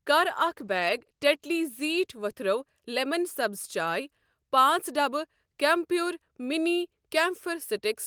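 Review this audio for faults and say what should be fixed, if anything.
A call bitrate drop runs from 0.31 s to 2.11 s. The speech turns coarse and rough for that stretch, then recovers. The encoder was starved of bits after the bandwidth estimate fell. The change fits a step from about 32 kbps down to about 15 kbps, held at the low rate for about 1.7 s. Fewer bits means coarser coding of every frame. To prevent it, hold a higher minimum bitrate floor and ramp down more gently when the estimate dips.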